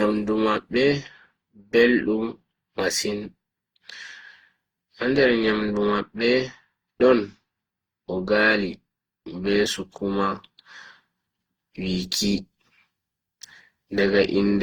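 Generation loss runs through the whole speech clip, from start to finish. The sound is swirly and hollow, with a smeared texture and softened consonant attacks, worse than a single lossy pass would leave. The likely cause is the audio being decoded and re-encoded around seven times, in a way that fits an Opus chain at 48 kbit/s. Each pass requantises on a shifted frame grid, so noise and spectral gaps pile up, while content still extends to about 20.2 kHz.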